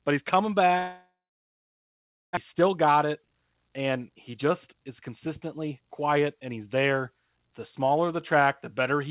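Right after "but he's coming", at 0.78 s, the sound breaks off in a long network dropout lasting until 2.39 s. The receiver stretches the last fragment into a fading buzz, then about 1.2 s of silence follows. When the audio returns, roughly a second of material is simply gone rather than delayed. That missing stretch, not a pause with everything resuming intact, marks this as lost packets rather than a stall. The likely cause is a network outage.

From 2.52 s to 6.57 s a jitter buffer speed-up follows. The dropout left the buffer holding about half a second more than it wanted, and the receiver trims it back by cutting tiny pitch-period slices over and over, so playback runs at 113% speed. The speech sounds hurried, but its pitch stays put, which separates this from a resampling or clock error that would raise the pitch too. The G.711 A-law path limits everything to below 4 kHz throughout.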